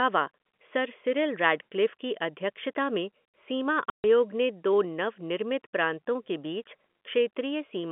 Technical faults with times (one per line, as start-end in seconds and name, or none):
3.90-4.04 packet loss filled with silence